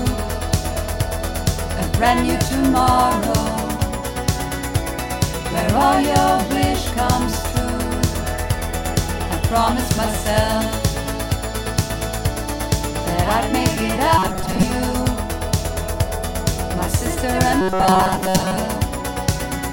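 From 14.18 to 14.63 s and again from 17.61 to 18.57 s, the sound turns into a rigid, metallic 188 Hz buzz, robotic sound from repeated short buffers. About half, then most, of each stretch is replaced, likely by a repeated 5.3 ms buffer. Unlike a pitch shift, the buzz stays fixed regardless of the original's pitch.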